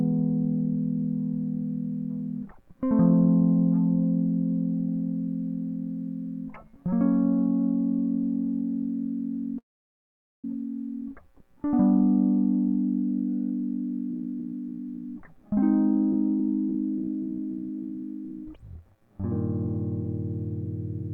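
A music clip carried over a call link, with a delivery stall and two catch-up passages. From 9.58 to 10.45 s there is what sounds like a call audio freeze, likely caused by packets held up in transit so that the jitter buffer ran dry. The receiver extends the last sound briefly and then drops to near silence for about 0.82 s of the roughly 0.85 s hole. When the packets arrive, the music picks up exactly where it stopped, so nothing is lost, but the playback now runs about 0.85 s later than before.

Two jitter buffer speed-ups follow, as the receiver finds itself holding more audio than its target and trims it down by repeatedly cutting out short pitch-period-length slices. From 14.11 to 15.63 s the music plays about 14% fast, shedding roughly a fifth of a second. From 16.12 to 20.05 s it runs about 10% fast, losing around 0.4 s. The pitch stays put in both passages, but the tempo visibly hurries and loses its steadiness.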